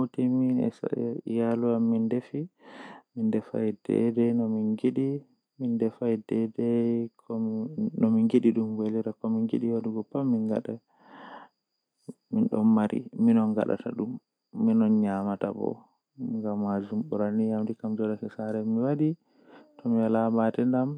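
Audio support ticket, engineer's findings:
No technical faults found in the speech signal; nothing to flag on the audio path.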